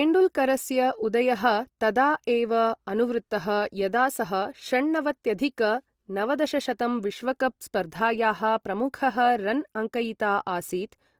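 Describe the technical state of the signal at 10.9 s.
At 10.9 s the speech carries Opus compression, present throughout: a grainy, rough texture where filled bands replace detail, likely low-rate CELT coding near 24 kbps despite content reaching about 20.3 kHz.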